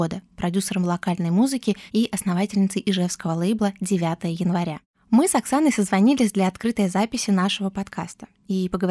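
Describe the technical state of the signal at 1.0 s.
At 1.0 s the signal is intact, with no audible fault at that moment.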